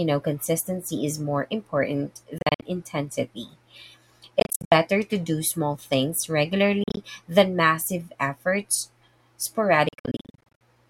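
Bluetooth dropouts break up this speech clip at 2.38–2.63 s after "consistency is more important", 4.40–4.72 s before "to do small things", 6.84–6.97 s before "than massive efforts", and 9.89–10.61 s. Each is a cluster of short silences, none longer than about 67 ms, with the speech resuming on time. This points to wireless packets likely arriving too late to play.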